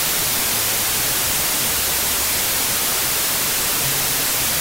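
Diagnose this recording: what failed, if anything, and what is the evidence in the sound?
The fault is a wrong sample width at the sample-format conversion stage, present for the whole clip. Loud noise buries a slowed, lowered version of the sound, at 0.667 times speed, consistent with packed 24-bit data read as 16-bit, splitting samples across mismatched bytes.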